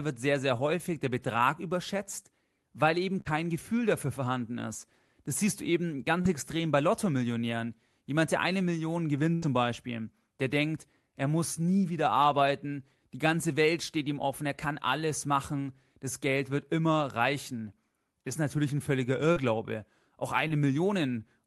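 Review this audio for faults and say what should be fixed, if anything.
Short concealed packet loss occurs five times. Audio packets arrived too late or not at all, and the receiver covered each gap of about 20 to 40 ms by extending the preceding speech before blending back into real audio. In this speech it is heard as a brief smear or wobble at 0.57–0.61 s (between "wird sehr sehr" and "häufig der"), 6.22–6.27 s, 11.54–11.58 s (between "der denkt er" and "nie wieder arbeiten"), 19.32–19.38 s and 20.48–20.52 s.

A burst of packet loss occurs twice: about 60 ms after "überschätzt weil eben" at 3.21–3.28 s, and about 80 ms at 9.34–9.44 s. Several consecutive packets were lost, so the receiver kept extending the last sound while fading it down. It comes out as a held buzz or fading hiss. Speech then resumes further along, and the stretch in between is gone.

Both faults arise in the network along the Opus call path, whose 12 kHz upper limit fits a low bitrate of around 24 kbps. 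Enabling Opus in-band forward error correction, along with a somewhat deeper jitter buffer, would cover these short and burst losses.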